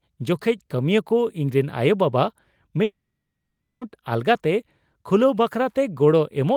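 A speech recording with one clear break: from about 2.83 s to 3.83 s the sound stops carrying anything new. For roughly the first tenth of a second the last bit gets stretched into a fading buzzy tail, then it's basically silence for about 840 ms before speech picks up again, with about 980 ms simply gone. That's the signature of a long network dropout, where packets likely never arrived and the receiver's concealment gave up and went quiet.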